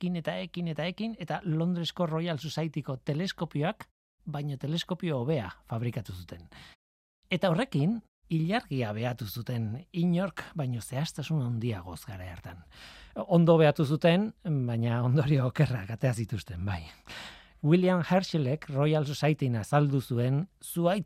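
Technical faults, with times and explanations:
No technical faults can be heard in the speech. In the pauses the output fades to silence and the background drops away, then returns in time for the next sound, so nothing spoken is lost.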